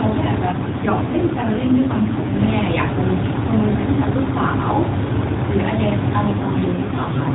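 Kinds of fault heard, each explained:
AMR rate drop: the mobile link switched the AMR coder to a lower mode, consistent with 12.2 falling to 5.9 kbps, so from 0.48 to 2.37 s and from 6.28 s onward the speech grows rougher and more synthetic, without gaps or band change.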